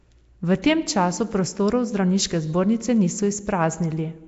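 Throughout, rough hiss and an underwater smear cap the speech at 7.7 kHz, likely Nellymoser compression. Starved bands are noise-filled, unlike MP3's swirling warble.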